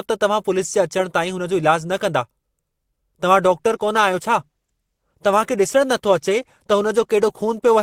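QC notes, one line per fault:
3.50–7.82 s, adaptive stream at a lower bitrate: codec artefacts abruptly rise with no gap, which fits the stream dropping from about 64 kbit/s to 16 kbit/s Opus.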